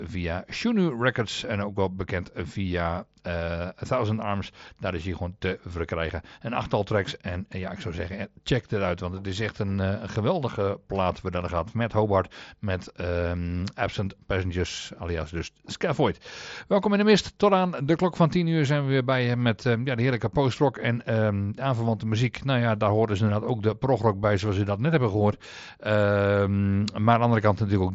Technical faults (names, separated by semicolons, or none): none